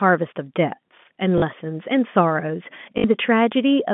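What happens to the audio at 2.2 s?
Nothing goes wrong at 2.2 s: the speech carries on intact through the narrow telephone band of the G.711 line, with no dropout, click or distortion at that point.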